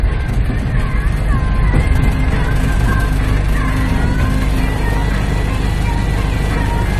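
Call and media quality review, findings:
Low-bitrate audio saved at a high bitrate, throughout. Symptom: nothing above 13.1 kHz, with smeared, swirly coding artefacts despite a high-bitrate MP3 container. Likely component: an earlier low-rate encode, sounding like AAC at roughly 48 kbit/s, re-encoded at high rate. Mechanism: the second pass preserves the earlier losses and restores nothing. Distinguishing detail: a plain lowpass would sound clean, and a native low-rate file would not carry this bitrate.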